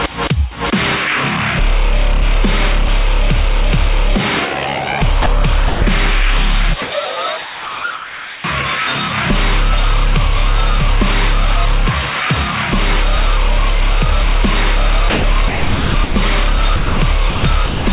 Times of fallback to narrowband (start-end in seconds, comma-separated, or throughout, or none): none